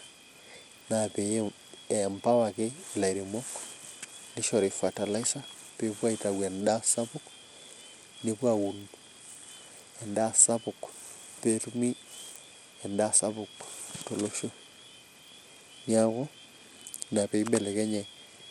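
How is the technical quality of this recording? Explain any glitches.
The recording is marred throughout by plainly audible codec damage. From start to finish the upper frequencies thin out and flicker, and a gritty, grainy noise with aliasing clings to the voice. This is likely Bluetooth SBC compression, and the audible damage fits a low bitrate around 96 kbps. SBC splits the signal into a few broad bands without modelling hearing, so at this rate the weak top bands are starved of bits while the rest are quantised coarsely.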